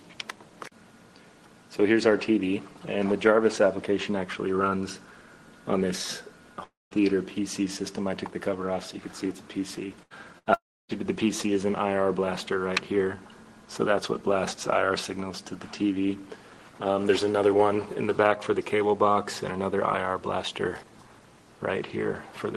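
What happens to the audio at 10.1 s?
At 10.03 to 10.13 s there is a burst of packet loss. A run of audio about 80 ms long never arrived in time, and the receiver filled roughly 76 ms of it by extending the last sound it had while fading it down. The result is a brief held, dimming smear before the sound jumps ahead with that stretch missing. On a spectrogram the frequency pattern turns flat and repetitive, darkens, then resumes abruptly. The waveform shows a looping, shrinking envelope.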